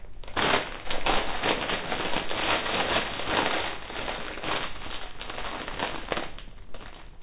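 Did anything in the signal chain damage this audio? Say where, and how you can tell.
No, nothing along the chain seems to have harmed this recording; I can't point to any spot where the sound gets damaged.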